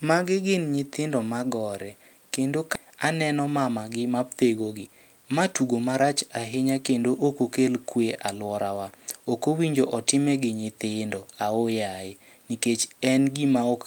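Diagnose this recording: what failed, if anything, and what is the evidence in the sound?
The failure is in the network path, at the receiver's jitter buffer. There is a skip ahead at 2.75 to 2.77 s. Roughly a second of speech is missing. Playback jumps straight forward with no gap filled. A stretch of audio was dropped while later audio was already waiting, and the two sides are joined directly.

The same jitter buffer then shows a speed-up. Speech runs about 9% fast from 2.84 to 3.70 s, and about 11% fast from 4.60 to 6.56 s. Pitch is unchanged, but the pace sounds hurried. Short pitch-period pieces were cut repeatedly, trimming about 100 ms and then about 200 ms of excess delay.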